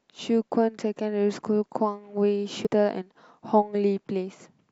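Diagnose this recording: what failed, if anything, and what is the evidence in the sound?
At the codec stage, the speech shows damaged data in a compressed stream: a brief glitch from 2.65 to 2.67 s. Corrupted bytes there made the decoder misread the frame, lose sync and resume only at the next valid header.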